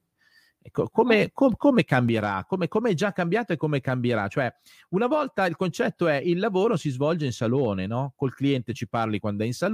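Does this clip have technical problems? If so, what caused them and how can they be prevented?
Yes. At 2.09 s, right after "come com come", the speech and the background noise drop together by about 5 dB in a single step, and the lower level holds to the end of the clip. This is a sudden gain jump, most likely from a digital gain setting applied from one sample to the next with no ramp. Any gain change should be smoothed over at least a few milliseconds so the level glides rather than steps.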